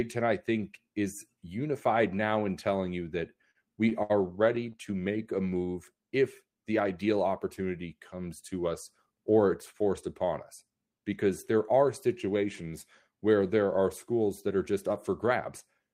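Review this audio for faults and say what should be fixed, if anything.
Repeated stalls (stutter) from 3.33 to 4.12 s, just after "in telling you that": late-arriving packets drained the jitter buffer five times, so the receiver stretched the last sound for about 141 ms in total, the longest gap 67 ms. Nothing is lost, but the speech drags and stutters. To prevent it, use a deeper adaptive jitter buffer and steadier network delivery.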